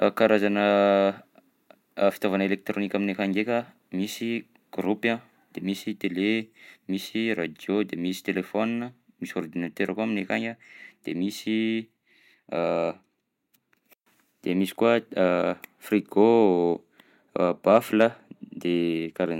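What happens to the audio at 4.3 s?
Nothing goes wrong at 4.3 s; the speech carries on intact through that moment with no audible fault.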